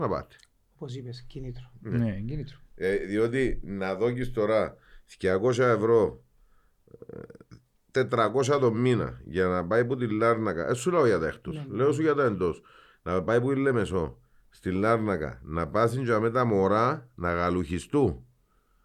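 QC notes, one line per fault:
No technical faults were found anywhere in the speech signal.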